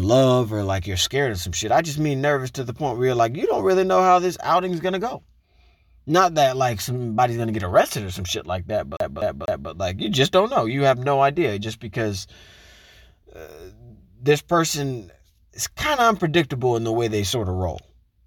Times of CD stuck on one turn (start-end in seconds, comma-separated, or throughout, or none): 8.97-9.70